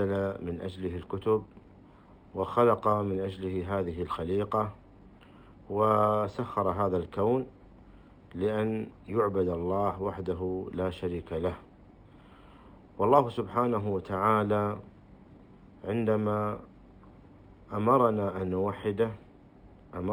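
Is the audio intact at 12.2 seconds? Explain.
No. At 12.2 seconds, as throughout, there is imaging from linear upsampling. The sound points to a 12 kHz source raised to 44.1 kHz by straight-line interpolation. The top is dulled, and faint mirrored images between 6 and 12 kHz add a light metallic shimmer.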